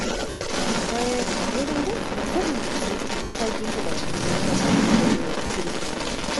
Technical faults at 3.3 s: Bluetooth LC3 compression; echo leak; lost LE Audio frames

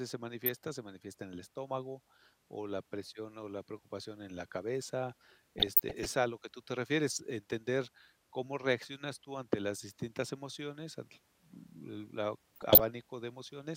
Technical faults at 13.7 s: none

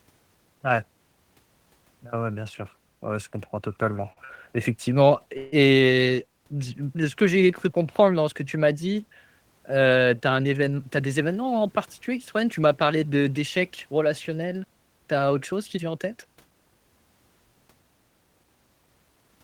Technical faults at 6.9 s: none

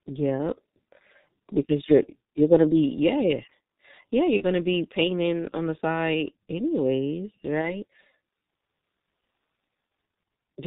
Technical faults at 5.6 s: G.723.1 codec

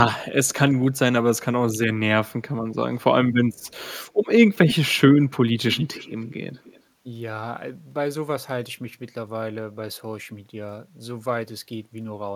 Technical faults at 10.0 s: none

